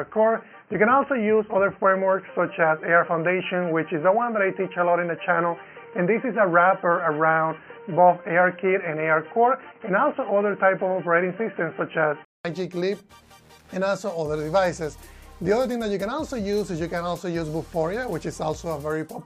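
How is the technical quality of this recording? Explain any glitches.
The recording has one clear fault, an input switched to a poorer device. From the start to 12.45 s, nothing passes above 3.1 kHz. The sound is dull and boxy. A faint background noise sits roughly 40 dB below the signal. At 12.45 s there is a silence of 200 ms. Then the full bandwidth returns and the level shifts by around 5 dB. The likely cause is the system capturing from a narrowband microphone or headset profile before switching back to the main input.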